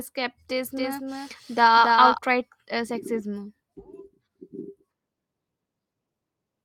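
From 0.76 to 2.18 s you get a doubled audio track: a second, full-band copy of the speech trails the original by roughly a third of a second, about 5 dB quieter, dry and switching on and off abruptly, likely from a slower second capture path.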